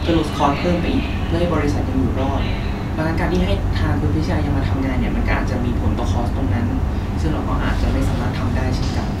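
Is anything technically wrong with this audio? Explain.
No, the speech signal shows no audible technical faults anywhere in the recording.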